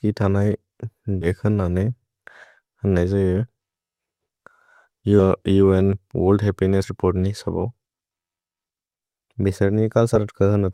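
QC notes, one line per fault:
1.21–1.28 s, 6.83–6.86 s, 10.15 s: compressed frames skipped. The speech jumps ahead about 70 ms at the first two points and about 40 ms at the last, fitting whole 20 ms frames.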